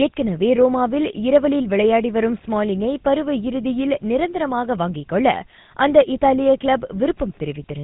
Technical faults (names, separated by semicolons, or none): GSM full-rate codec